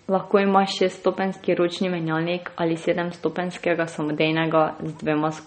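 Speech runs throughout with plainly audible damage that sounds like MP3 compression at a low bitrate, likely around 32 kbps. Nothing remains above 8.4 kHz, and s sounds turn swirly and chirpy. That watery flicker marks it as a codec rather than a simple low-pass filter.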